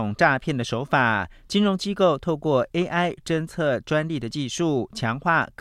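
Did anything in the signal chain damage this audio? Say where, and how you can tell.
No, nothing in this speech points to signal-chain damage.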